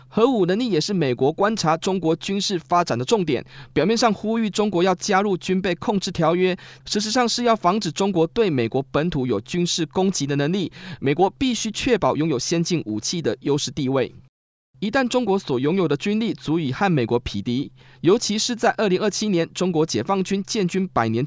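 Nothing technically wrong turns up anywhere in this bit of speech, so there are no times or causes to point to.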